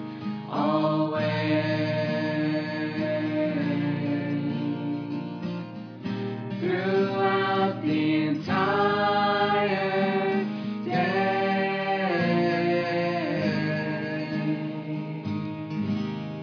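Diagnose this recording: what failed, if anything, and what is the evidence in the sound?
Nothing in the signal points to a failure at any stage of the chain, and the recording holds steady throughout.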